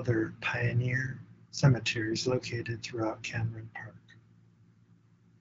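The speech is carried over an AMR wideband (HD Voice) link at 12.65 kbit/s, a rate that keeps it clear with only light coding colouring, and no technical faults occur anywhere in the signal.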